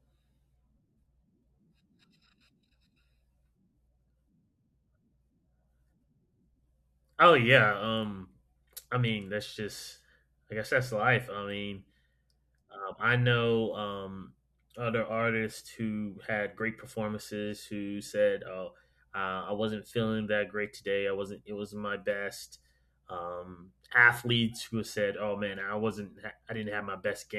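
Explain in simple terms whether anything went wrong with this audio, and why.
Nothing went wrong here: the recording stays steady and intact the whole way through, with no technical problems in the signal that a listener would hear.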